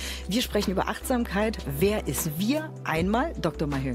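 Nothing in the audio stood out as a technical problem on listening.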